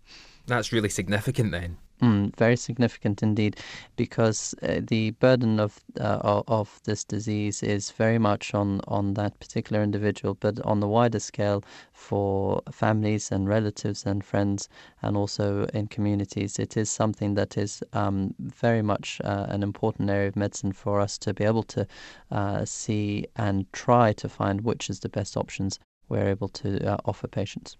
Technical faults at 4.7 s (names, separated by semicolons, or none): none